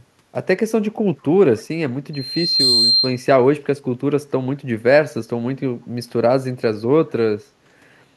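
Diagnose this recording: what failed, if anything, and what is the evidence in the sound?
Loudspeaker feedback squeal in the analogue mic-to-speaker loop: from 2.13 to 3.24 s a 4.2 kHz tone swells over about half a second as loop gain tops one.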